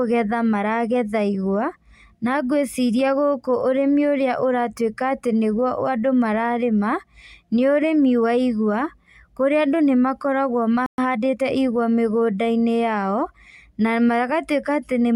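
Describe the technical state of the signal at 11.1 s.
At 11.1 s the speech is in a time-compressed catch-up, from 10.98 to 11.46 s. Small pieces are cut and cross-faded, so it runs 1.25 times fast at normal pitch.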